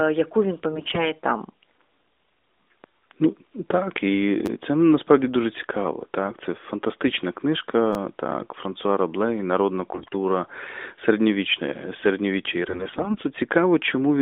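The speech sits in a narrowband AMR channel, with nothing on the spectrogram above about 3.7 kHz or below about 250 Hz, and at 0.72 to 1.11 s, right after "яку він", AMR bit errors set in. With roughly a fifth of the less protected bits flipped, the excitation pulses land in the wrong places and the gain and spectral values drift, so the voice keeps its rough pitch and level but turns hoarse and gargly. On a spectrogram the harmonics smear into ragged noise.

At 4.46 to 4.48 s, just before "це насправді дуже цікаво", a repeated buffer replays one 10 ms slice two extra times, which fits a 10 ms buffer starved of new audio. About 20 ms of real sound is lost, and the result is a brief buzzy stutter. The waveform shows identical short blocks side by side with hard joins.

AMR bit errors return at 7.08 to 7.21 s with a lighter error rate of around one in ten, heard as a short scratchy blur. The repeated buffer recurs at 7.93 to 7.95 s, with the same tripled 10 ms block and buzz.

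Heavier AMR bit errors hit 9.94 to 10.15 s, again at roughly a fifth of bits. The last stretch runs from 12.62 to 13.20 s after "середньовіччя і". Its error rate is low, just a few percent, so the roughness is milder but longer, with formant bands flickering across that span.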